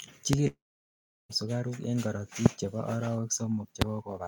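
At 0.33 s a single loud pop, far louder than the speech, sits on top of it while the speech carries on underneath. This is likely a voltage pulse rather than lost audio. From 0.47 to 1.31 s a long network dropout likely takes out about 0.82 s: a fading buzz gives way to roughly 0.71 s of near-silence, and the speech resumes with that stretch missing. The same brief pop recurs at 2.46 s and 3.82 s.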